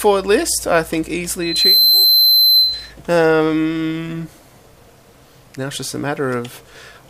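At 1.42 s a loudspeaker feedback squeal starts. A microphone is hearing its own loudspeaker, and at 4.1 kHz the loop gain passes one. The tone swells within about a third of a second. It sits roughly 5 dB above the sound, then stops at 2.9 s.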